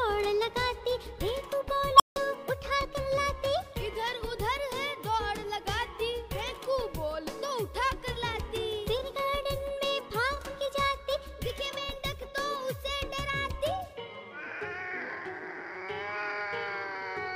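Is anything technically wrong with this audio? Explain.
Yes. At 1.94 s an unstable filter takes over. A tone of around 1 kHz swells within 54 ms and clips. The recursive filter's output is feeding back without limit. Its values then overflow, and the sound drops out for about 160 ms, until 2.16 s.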